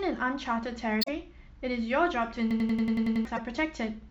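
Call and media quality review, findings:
Damaged data in compressed stream, 1.01–1.09 s: short glitch in the speech. Corrupted or lost bytes in the encoded stream; the decoder misreads or rejects those frames, loses sync, then resumes at the next valid frame header.

Damaged data in compressed stream, 3.37–3.39 s: second, briefer blip of the same kind. Same mechanism, a tiny corrupt span in the codec stream causing a brief decode failure and resync.

System hang loop, 2.51–3.25 s: machine-gun stutter, one 92.9 ms slice repeated 8 times at 10.8 Hz, about 0.7 s of speech lost. Host or driver stalled while the audio device kept replaying its ring buffer, consistent with a 4096-sample buffer.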